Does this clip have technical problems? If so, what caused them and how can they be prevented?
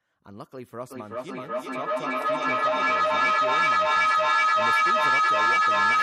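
Yes. Feedback howl starts at 0.9 s and runs to the end of the clip. Sound from a loudspeaker is reaching a microphone on the same call and being sent straight back out, gaining level on each pass instead of dying away. The repeats narrow to a tone around 1.5 kHz that pulses roughly every 400 ms and peaks about 15 dB above the speech. To prevent it, keep only one device unmuted per room, or use headphones so the loudspeaker can't feed the microphone.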